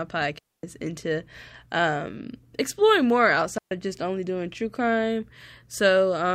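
At 0.39 s and again at 3.58 s the speech drops into clean near-silence, for about 250 ms and 130 ms, with no noise burst on either side. These are digital wireless dropouts: the radio link lost too much data, so the receiver muted briefly.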